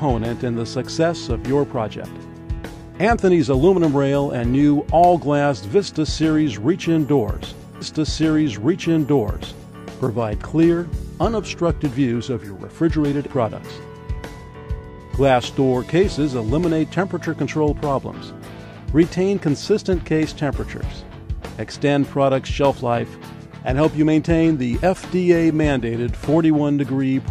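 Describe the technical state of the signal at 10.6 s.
Around 10.6 s the signal is intact, with no audible fault at that point.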